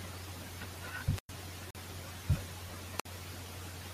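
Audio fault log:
1.14–1.32 s and 2.98–3.06 s, wireless microphone squelch dropout: the speech fades into a brief lift of hiss or static, then drops to near silence for about 104 ms in the first event and about 57 ms in the second before the voice comes back. The FM radio link lost enough signal strength that the receiver's squelch gated its output shut, so the mute follows the noise burst rather than cutting in cleanly.
1.71–1.76 s, corrupt frame muted: a hole of about 52 ms opens abruptly in the speech with no fade or noise lead-in. Bit errors in the compressed stream made the decoder reject the damaged data, and the player filled the gap with silence. The length fits two consecutive frames of roughly 26 ms each being discarded. Because silence replaces the frames rather than removing them, the timing of the speech on either side stays intact.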